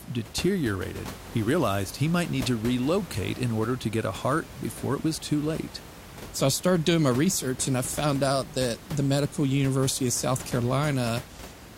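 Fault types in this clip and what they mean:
No faults heard.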